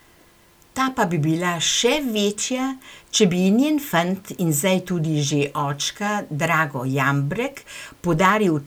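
No technical faults are audible.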